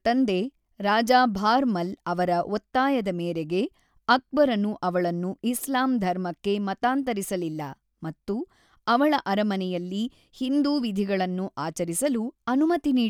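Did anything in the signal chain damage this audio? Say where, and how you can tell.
No, nothing in the signal chain can be heard damaging this speech recording. No stage, from capture through to playback, has left a mark that can be pointed to at any moment in the clip.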